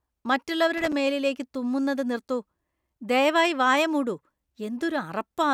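At 0.78 s a loose connector crackle breaks into the speech and lasts until 0.93 s. A worn or dirty contact is making and breaking as it moves, chopping the signal on and off. It sounds like a short, irregular scratchy burst. The words "മേലിലേക്കു തുമ്മുന്നത് നിർത്തു" follow straight after.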